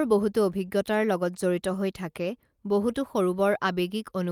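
No technical faults are audible.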